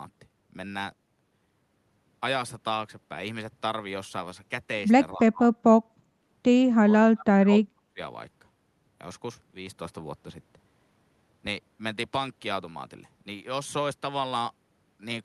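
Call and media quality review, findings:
Speech suppressed in double talk, 5.12–5.54 s and 6.82–8.0 s: level drops about 25 dB, then about 30 dB, roughly a second in the second span. Likely echo canceller ducking the near talker during overlap. Unlike packet loss, the speech is attenuated without glitches or concealment artefacts.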